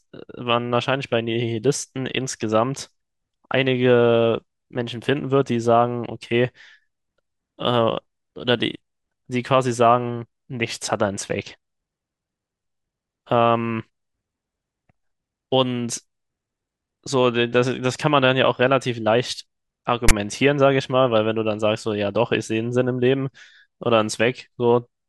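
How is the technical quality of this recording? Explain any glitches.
The recording has one clear glitch: file tags played as audio, from 20.09 to 20.11 s. The decoder treated a block of text metadata as if it were sound samples. Character bytes, read as audio values, sit well off centre and jump around coarsely, so the speech is replaced by a harsh, lopsided rasp. The zero padding after the text comes out as dead silence. The result is a hard-edged burst of static that stops abruptly.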